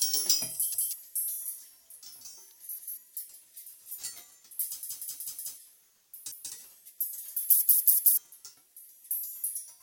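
Everyday sound with repeated buffers at 0.74, 2.79, 4.83 (played four extra times), 6.32 and 7.62 s (three extra): a roughly 186 ms chunk, consistent with an 8192-sample buffer, replays when new audio arrives late, skipping audio. The waveform shows identical blocks with hard joins, and the spectrogram shows vertical seam lines.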